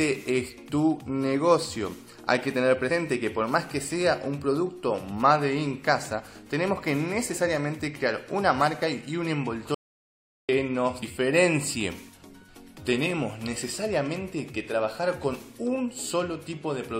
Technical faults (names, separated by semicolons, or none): compressed frames skipped; audio dropout to silence